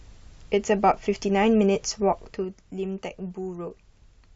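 From 2.1 to 2.55 s the speech drops by roughly 10 dB in unsmoothed steps of about 2 dB, around ten per second. Each step clicks, giving zipper noise. This fade ticks audibly as it descends.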